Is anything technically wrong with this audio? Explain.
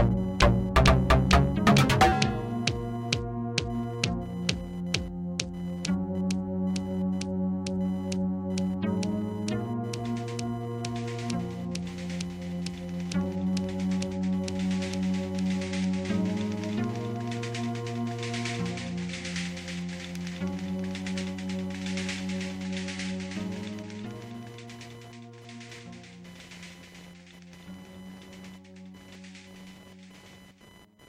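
Yes. Computer activity noise runs throughout. Processor or graphics load shifts the shared ground, adding a buzzing, chirping whine near 1 kHz, roughly 25 dB below the sounds.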